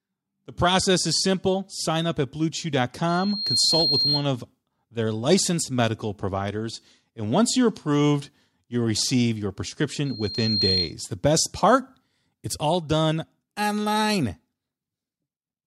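Loudspeaker feedback squeal appears from 3.08 to 4.28 s, just before "of their licensed medical", and again from 10.05 to 10.95 s, right after "approved you'll receive your". The microphone is re-amplifying the loudspeaker, so a 4.2 kHz tone swells over roughly half a second to about 5 dB above the speech.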